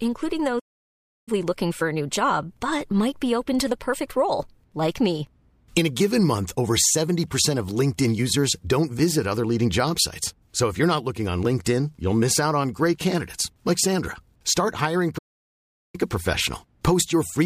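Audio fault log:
0.59–1.29 s, playback stall: the player likely ran short of buffered data or had its output thread blocked, so it sent nothing for about 0.68 s. The speech cuts out in mid-flow to silence, then picks up again at "looking for a new".
15.18–15.96 s, playback stall: the same likely starvation or blocking halts the output a second time, now for about 0.76 s. The speech drops to silence mid-flow before carrying on.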